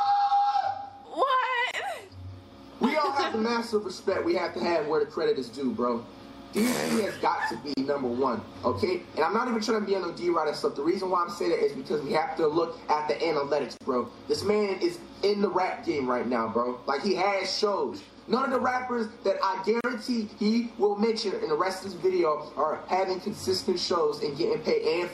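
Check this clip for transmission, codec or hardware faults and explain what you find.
Four brief silences break the sound, all of one kind: a gap at a join of encoded pieces, recurring every 6.0 seconds, at 1.71–1.74 s, 7.74–7.77 s, 13.77–13.81 s and 19.81–19.84 s.

Separately encoded pieces were joined with each run's start-up delay and final-frame padding left in. Each join opens a 27–34 ms hole with smeared edges, then the sound resumes where it stopped.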